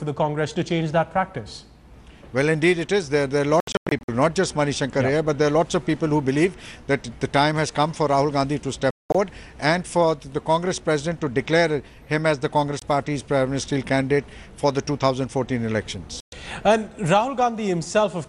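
Digital broadcast dropout occurs at 3.60–4.09 s, 8.91–9.15 s, 12.79–12.82 s and 16.20–16.33 s. The receiver lost good frames and muted, so the sound cuts to silence. The first dropout breaks into short holes of up to 96 ms, and the second is mostly one 192 ms gap. Audio resumes later, and the missing material is gone.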